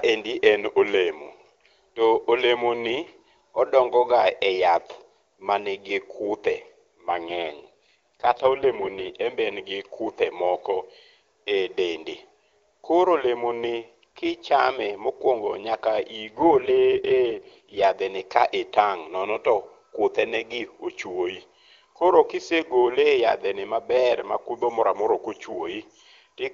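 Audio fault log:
7.10 to 9.11 s and 16.23 to 17.84 s, AMR rate drop: the wideband codec was pushed to a lower rate, spending fewer bits on the voice, so after "e yath manigi kuthe" and before "en be en gi", and again before "ni ka", the speech turns rough and synthetic without losing bandwidth or leaving a gap. This fits a fall from 23.85 to 8.85 kbit/s.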